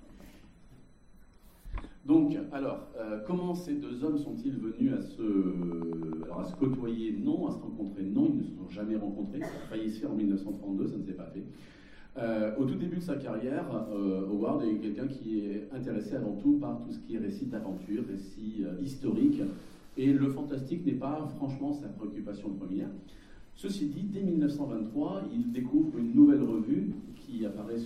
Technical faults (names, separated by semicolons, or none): train of clicks